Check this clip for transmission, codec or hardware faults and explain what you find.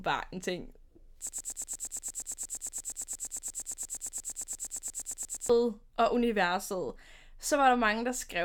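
One fault is present: a broken-record loop from 1.29 s to 5.50 s. A fragment of speech about 117 ms long repeats exactly, back to back, 36 times, producing a rapid mechanical stutter in place of continuous speech for over four seconds. The likely cause is a stalled player, encoder or stream that kept re-sending the last short piece it held. Whatever speech belonged in that span is gone, and normal speech resumes with "og universet".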